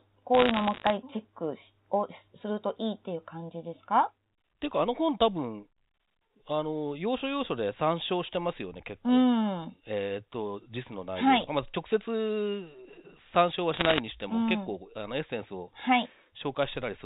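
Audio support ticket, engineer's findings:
Bit errors on a digital phone line, 0.35–0.9 s and 13.74–14.0 s. Crackle of sharp ticks over intact speech; flipped sign or high-order bits in A-law samples on the G.711 path, error rate somewhere near one percent, slightly worse in the second burst.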